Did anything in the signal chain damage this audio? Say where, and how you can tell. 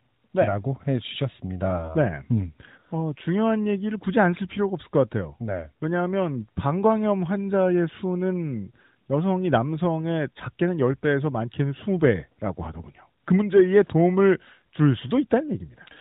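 No, no stage damaged it.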